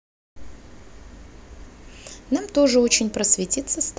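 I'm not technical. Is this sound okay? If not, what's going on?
Yes, this sound is okay; there's nothing going wrong in it.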